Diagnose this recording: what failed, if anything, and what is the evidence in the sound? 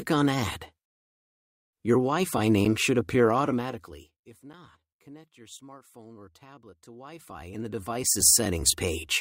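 Zipper noise appears from 6.79 to 8.29 s, at the driver or buffer stage. A level move of around 25 dB arrives in unsmoothed 1 dB steps, roughly fifteen per second. Each step clicks, and the clicks form a ticking zip over the sound.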